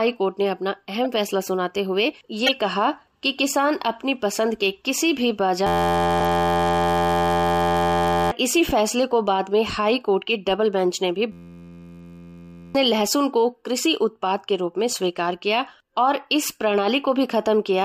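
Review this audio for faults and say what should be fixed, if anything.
There are corrupt frame decoded blips at 1.04–1.06 s, 2.46–2.51 s and 6.20–6.24 s. Damaged compressed frames got played anyway, so energy lands at the wrong frequencies as short chirps. The 2.46 s one is the loudest, peaking around -5 dBFS. Catching bad frames with checksums and concealing them would stop this.

The bigger issue is the system hang loop at 5.67–8.31 s and 11.32–12.75 s. The same 11.61 ms slice repeats, giving a steady 86.1 Hz buzz, which fits a 512-sample buffer. It wipes out roughly 3 s and 1.5 s of audio. A watchdog that mutes the output when the driver stalls would prevent it.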